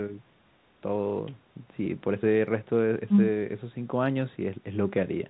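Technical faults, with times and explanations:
No technical faults can be heard in this clip, so there are no times or explanations to give.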